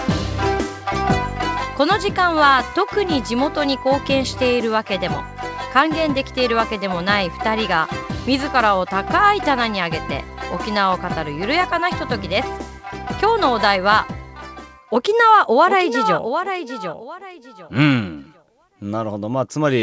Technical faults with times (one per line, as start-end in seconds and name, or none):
none